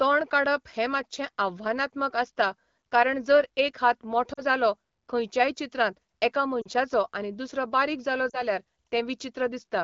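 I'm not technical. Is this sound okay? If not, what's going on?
No. Radio errors corrupted small pieces of the call, so some AMR speech frames were lost and the phone briefly filled the gaps, giving lost AMR speech frames: brief dips toward near silence at 4.33 s after "एक हात", at 6.61 s after "जालो खंयच्याय चित्रांत एका", and at 8.30 s after "दुसरो बारीक जालो".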